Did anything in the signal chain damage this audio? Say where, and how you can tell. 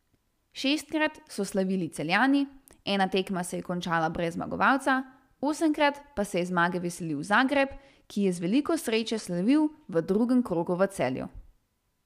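Yes, a Bluetooth SBC bit pool drop in the codec. From 6.94 to 10.02 s, after "je zmage", the treble dulls and grit creeps in, which fits the bit pool falling from 31 to 15.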